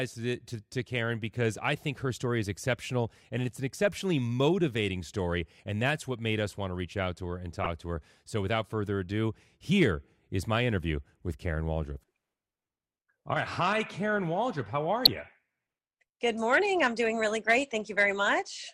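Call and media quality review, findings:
DAB burbling at 0.75–0.82, 7.64–7.66 and 15.05–15.08 s. Residual bit errors corrupt MP2 sub-band samples and scale factors. On the spectrogram: isolated sub-band blocks flashing in level.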